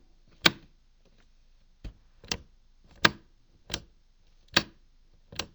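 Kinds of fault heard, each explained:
Stereo read as mono: throughout, interleaved left and right samples play in sequence as one channel, so the sounds run at half speed, a full octave low.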